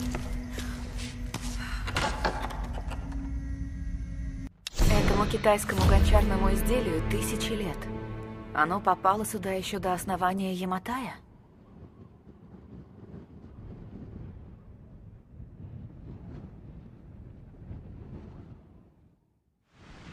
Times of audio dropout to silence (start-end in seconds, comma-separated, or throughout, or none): none